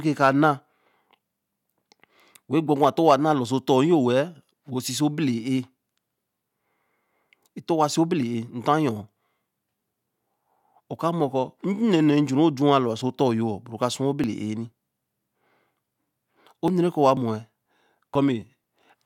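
From 14.24 s to 18.64 s, periodic USB or driver dropouts recur every 0.49 s. Each one skips roughly 10 ms of audio, producing regular ticks through the speech.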